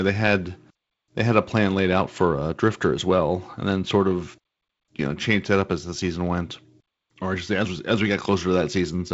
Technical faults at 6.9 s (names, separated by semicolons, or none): none